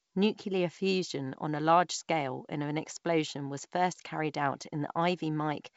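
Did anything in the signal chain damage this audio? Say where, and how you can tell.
No, nothing damaged this audio.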